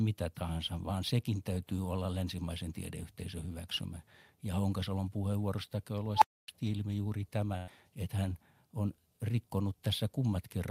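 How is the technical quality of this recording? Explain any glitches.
The recording has three glitches close together, all in the later part of the speech.

At 6.16 s, right after "puheenvuorosta käy", a beep around 1 kHz swells to a harsh, clipped squeal in about 61 ms. The sound then drops out for about 0.27 s before "ilmi juuri tämä että". This is an unstable filter: bad coefficients made a recursive filter's output grow until it overflowed and reset.

From 7.57 to 7.71 s, after "ilmi juuri tämä", the last sound is stretched into a fading held tail for about 100 ms. Speech then resumes at "että hän on", with that stretch of audio gone. This is a burst of packet loss, where the receiver covered the missing packets by continuing and attenuating the previous sound.

At 7.68 s, inside that same gap, a 20 ms slice sounds rougher and noisier rather than silent. That is a lost packet rebuilt from error correction: the following packet carried a low-bitrate copy of the lost one, and the decoder played that copy.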